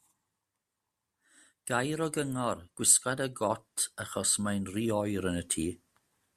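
No technical faults can be heard in this speech recording.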